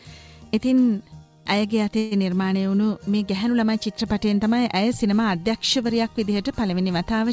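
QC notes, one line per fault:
1.98–2.24 s, call audio freeze: the last sound is held as a short fading tone for about 0.13 s, then the audio resumes exactly where it stopped, now running about 0.13 s late with nothing lost. The likely cause is delayed packets emptying the jitter buffer on this G.722 call path.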